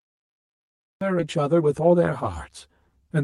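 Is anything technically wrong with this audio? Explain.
Yes, there are four separate problems.

Channel delay (comb filtering) runs through the whole clip. One channel lags the other by about 10 ms, and mixing them to mono cancels energy at regularly spaced frequencies. The first notch falls near 40 Hz, with further notches roughly every 100 Hz. The speech sounds hollow and phasey. A spectrogram shows fixed horizontal dark stripes.

Cut-off start: the file is digital silence from 0 to 1.01 s. Speech then begins abruptly, already mid-sound, because capture started late. There is no natural onset or fade-in. The waveform is a flat line that jumps straight into the speech waveform at 1.01 s.

Skip ahead: between 1.19 and 1.21 s, roughly 0.7 s of speech is missing. Playback jumps forward with no gap filled in, so the two sides of the jump are joined almost directly. The speech lurches forward. 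A spectrogram shows a sudden discontinuity in formants and harmonics at the joint.

Jitter buffer speed-up: from 1.37 to 2.12 s the receiver trimmed short pitch-period slices to reduce excess buffered delay. It removed around 150 ms in total, so playback runs at 116% speed with unchanged pitch. The speech sounds hurried. A spectrogram shows syllables compressed in time, with harmonic spacing unchanged.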